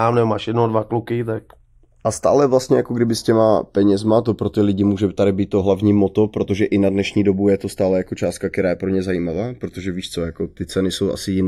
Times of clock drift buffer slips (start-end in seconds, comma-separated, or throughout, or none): none